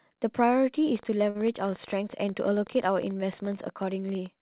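A train of clicks runs from 0.96 s to the end, about 11.5 per second at an irregular pace and about as loud as the speech, likely from interference or a faulty connection. A short stall from a late packet follows at 1.30 to 1.37 s: the jitter buffer ran dry, so the receiver held the last sound for 49 ms, audible as a brief stretched sound with a slight buzz or dip, then resumed without losing anything.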